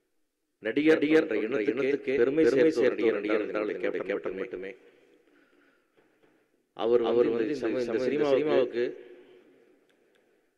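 Right through the clip there's a doubled audio track: a second, equally loud copy trails about 300 ms behind, dry and full-band, likely from a slower duplicate capture path.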